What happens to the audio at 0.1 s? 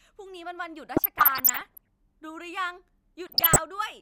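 Nothing goes wrong at 0.1 s; the audio is intact at that moment.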